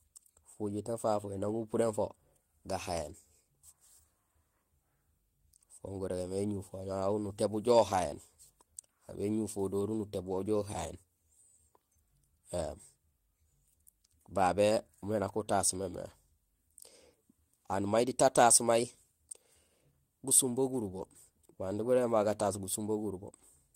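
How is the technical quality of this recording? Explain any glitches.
No technical faults are audible.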